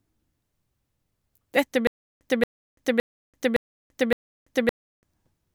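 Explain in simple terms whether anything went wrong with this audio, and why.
From 1.87 s to 5.03 s the speech gets stuck in a stutter with silent gaps: the same short 0.23 s snippet repeats five times, each followed by about a third of a second of dead silence. Likely the stream stalled, replaying its last bit while waiting, so the real audio there is gone.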